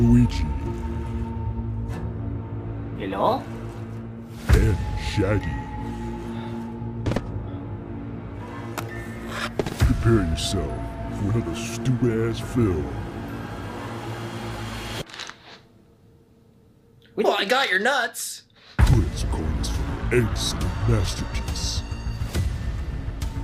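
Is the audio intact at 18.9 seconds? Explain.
No, there's a loud pop from 18.93 to 18.96 s, a single sharp click peaking about 10 dB above the sound, which keeps running underneath. It's likely a brief voltage spike, from a switch, plug or static discharge, that got into the signal path.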